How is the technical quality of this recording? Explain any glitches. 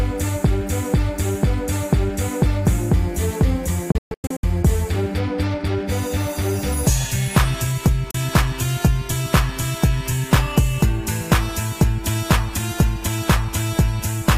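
The recording has two digital broadcast dropouts. From 3.92 to 4.44 s the sound mutes in several short holes across about half a second, the longest 128 ms, about 352 ms lost in total. At 8.11 s one 32 ms hole follows, fitting a single bad frame. The receiver muted each failed frame with a 3 ms fade, so the sound simply jumps ahead. It is clean silence and lost content, not smeared concealment or a stall that resumes where it stopped.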